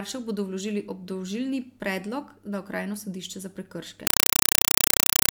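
At 4.07 s, after "sodišče za", the speech gives way to a compressed stream played as audio: undecoded Dolby Digital data treated as samples. Unlike steady hiss or clipping, it chatters, with 4 ms static bursts separated by silence, 31.25 times a second.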